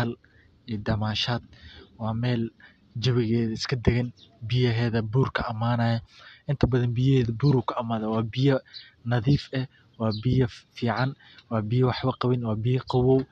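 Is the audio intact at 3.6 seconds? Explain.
Yes, the speech at 3.6 seconds plays through intact, with no audible fault at that moment.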